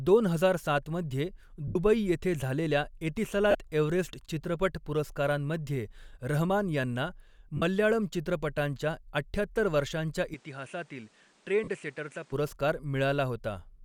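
Lost LE Audio frames at 1.68 to 1.76 s, 3.51 to 3.55 s and 7.57 to 7.62 s force the LC3 decoder to repeat its last spectrum with randomised signs, so the sound briefly smears into noise.

From 10.34 to 12.32 s the input likely switched to a poorer device. With no gap at the change, everything above 10.5 kHz vanishes, the level drops by about 5 dB, and new background noise sits about 30 dB down. Inside that stretch, another frame loss at 11.64 to 11.68 s smears the sound again.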